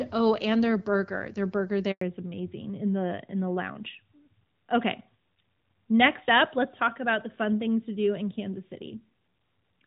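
At 1.91 s there's a handover gap: the call jumps between networks and no speech frames get through for about 100 ms, so the speech just cuts out, going quiet until 2.01 s when the new link picks up. Whatever was said in that slice is gone.

Right after, from 2.01 s to the end, there's a fallback to narrowband. Before the gap, the clear HD Voice sound points to AMR-WB at around 12.65 kbit/s; afterwards the top end above 4 kHz disappears completely, leaving the speech duller and rougher, like an old-style phone call.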